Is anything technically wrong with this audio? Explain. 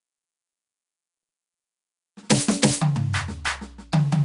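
Yes, there's plainly audible codec damage on this music the whole way through. It sounds like Nellymoser compression, and the likely cause is the old Flash codec. At a fixed two bits per sample, starved bands get filled with noise, giving a rough, hissy, smeared texture, nothing above about 10.6 kHz, and a grain that fits roughly 44 kbps.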